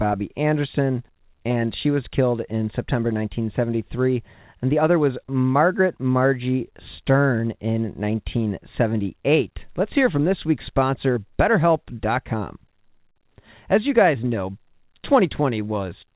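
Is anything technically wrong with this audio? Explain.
No, nothing in this speech clip stood out as a technical problem on listening, and its narrowband call-path sound, with nothing above 4 kHz, fits a G.711 line working as intended.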